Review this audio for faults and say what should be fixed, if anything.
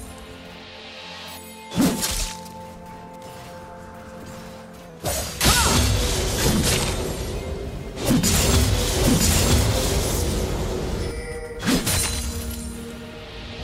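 From 4.89 s to 7.33 s the audio drops in pitch by about 108 cents, just over a semitone, and runs about 6% slow, with speed and pitch moving together before returning to normal. This is likely a drift correction step: software matching two clocks changed the playback rate in one jump to refill its buffer, and this step is far larger than normal. Limit the resampler's correction range and adjust the rate gradually.

Between 8.24 s and 11.11 s a second copy of the sound plays about one second behind the original, at roughly the same level. It is full-band, with no decay or room colour, and it starts and stops abruptly. This doubled audio track likely comes from the same material being captured again through a slower path, or from an edit that left two misaligned copies. Remove the duplicate copy, and make sure each source reaches the mix only once.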